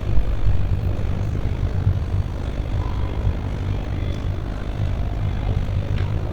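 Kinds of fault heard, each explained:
Overlap-add ripple: the frames were rejoined with an overlap whose windows don't sum to a steady gain, so the level dips and swells about 11 dB once per frame. Here that runs around 50 times a second for the whole clip, a rough, buzzy tremolo.
Jitter buffer speed-up: from 1.54 to 2.41 s the receiver trimmed a surplus of buffered audio by cutting out short pitch-period pieces, around 40 ms in total. The sound plays about 3% faster without a pitch change.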